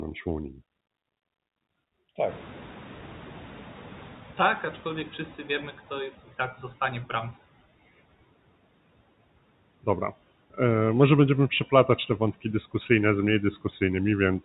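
Around 2.5 s the room noise jumps by about 21 dB, and from 2.28 s the noise suppressor is catching up. Its noise estimate lags. The noise passes with little reduction at first. Over 3.83 s it sinks by about 11 dB, settling by 6.11 s, just before "tak zostanie w bramce".

From 11.88 to 12.45 s, between "może będziemy" and "dyskusyjne z mniej", speech is cut by the noise suppressor. It mistakes quiet parts for noise. They drop by up to about 12 dB. In all, about a tenth of a second sounds swallowed and faint.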